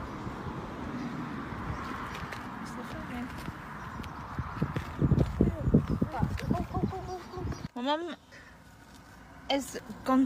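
No faults turn up anywhere in the recording: no dropouts, clicks, distortion or timing glitches.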